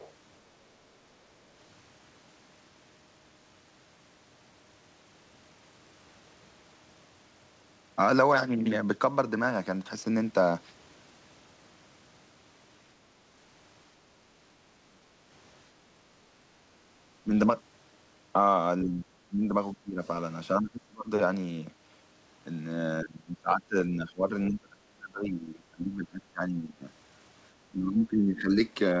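Speech, carried over a call link whose audio stops at 8 kHz, consistent with a wideband codec such as G.722. For the first 0.11 s a faint second voice sits about 25 dB under the talker: the other side's voice leaking through, likely from loudspeaker echo the canceller failed to remove. Later the talker's speech repeatedly dips or drops out, at 14.85–15.15, 17.23–17.32, 18.84–19.54, 19.73–20.01, 20.6–21.11, 23.02–26.85 and 27.69–28.51 s. The cuts are as deep as roughly 30 dB, and the longest span has around three seconds affected. This is likely speech suppressed in double talk, where the echo canceller turns down both voices while the far end talks over the near end.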